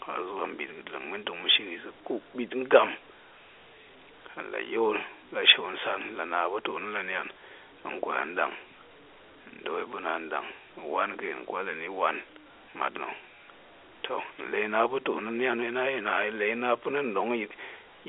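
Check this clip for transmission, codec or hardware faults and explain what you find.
The speech comes over a G.711 A-law telephone line at 64 kbps, confined to the usual 300 Hz to 3.5 kHz line band with nothing above about 3.7 kHz, and no transmission, codec or hardware fault can be heard anywhere in it.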